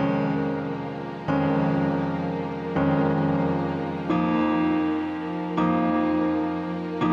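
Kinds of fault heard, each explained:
Gain pumping: The gain swings about 5 dB, pulled down under each loud sound. A limiter likely fights too-high input gain.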